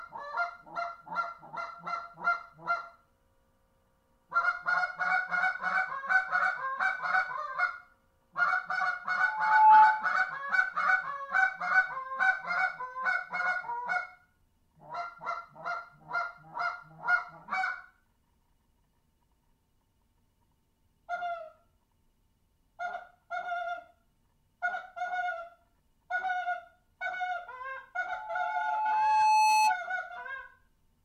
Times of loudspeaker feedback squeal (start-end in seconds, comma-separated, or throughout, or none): 9.19-10.13, 28.08-29.78